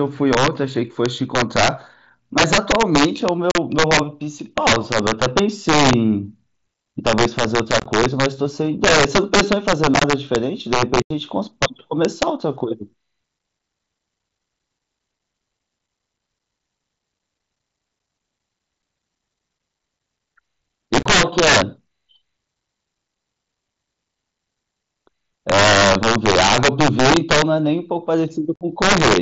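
Voice packets between headset and phone were dropped with nothing filling in, which is unconcealed Bluetooth headset packet loss, at 3.51, 7.80, 9.94, 11.02, 21.0 and 28.56 s. Each leaves an abruptly edged hole of 38 to 83 ms in the speech. The losses at 7.80, 9.94 and 21.0 s are split into several short gaps that sound chopped.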